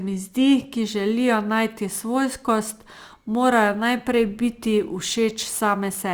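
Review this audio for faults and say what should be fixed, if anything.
From about 0.8 s to the end there's sample clock jitter. The converter's timing wobbles by a few microseconds, so steep, bright parts of the speech pick up a rough hiss roughly 30 dB down. Lock the converter to a clean, stable clock source to prevent it.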